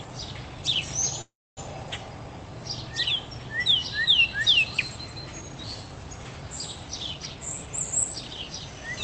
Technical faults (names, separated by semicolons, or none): call audio freeze; jitter buffer speed-up